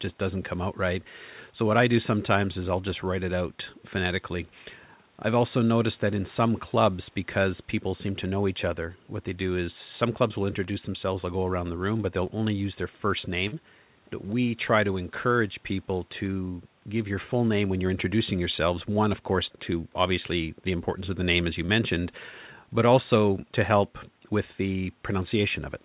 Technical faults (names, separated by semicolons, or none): short concealed packet loss